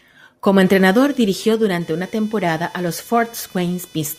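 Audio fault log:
0.50 to 4.18 s, computer activity noise: a chirping buzz enters half a second in and continues to the end, pulsing at roughly 500 times a second and sitting around 30 dB below the speech. It follows the computer's load, not the speech. Processor, graphics or mouse activity pulls current through the ground shared with the audio circuit, and those fluctuations reach the signal path as noise.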